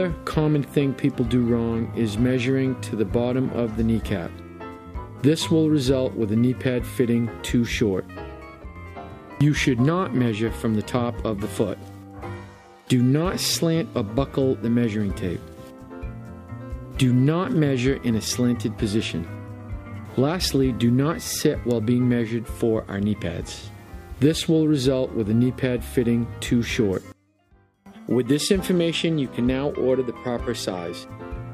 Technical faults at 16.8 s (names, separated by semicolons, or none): none